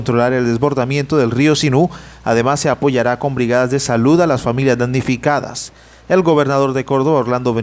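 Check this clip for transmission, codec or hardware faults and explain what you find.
Nothing here stands out as a transmission, codec or hardware problem; it all sounds perfectly fine to me.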